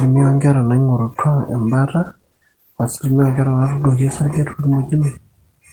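Speech clip with a call bitrate drop from 2.03 to 5.41 s. The encoder codes more coarsely, roughening the sound. This fits a fall from 32 to 16 kbps, bottoming out for 2.3 s.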